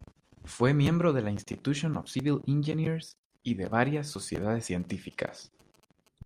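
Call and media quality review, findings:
GSM signalling bursts, 3.72–6.08 s, starting just after "y de". Galloping dit-dit-dit ticks with short 217 Hz buzzes, faint, roughly 30 dB under the speech. Probable component: analogue mic or line stage near an idle 2G handset. Mechanism: the handset's brief signalling transmissions are rectified in the audio circuit, demodulating the 217 Hz burst envelope into audible ticks and buzz.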